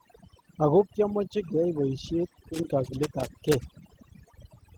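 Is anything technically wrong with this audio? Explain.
Yes, there are three faults, two running the whole length of the speech and one confined to the back half.

Overdone noise removal is present throughout. A noise reduction stage has been pushed too hard, so any frequency band that sits close to its noise estimate is pulled right down or removed, and the softer parts of the speech are removed along with the hiss. The background drops to an unnatural near-silence scattered with small twinkling specks.

Opus voice compression also runs throughout, with damage that is plainly audible. The sound points to hybrid operation, with a linear-prediction core handling the lower band and a transform layer covering content above 8 kHz. Fullband bandwidth is kept, with nothing above 20.2 kHz. The coarse coding suggests a low bitrate around 16 kbps in 20 ms frames. The excitation is quantised roughly, giving a somewhat hoarse, slightly robotic edge to the speech.

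Loose connector crackle starts at 2.54 s, just after "kiamache keyai boisiet", and continues to 4.32 s. A worn or dirty contact somewhere in the signal path is making and breaking rapidly, chopping the signal on and off many times in quick succession. The result is an irregular, scratchy burst of crackle laid over the speech for nearly two seconds.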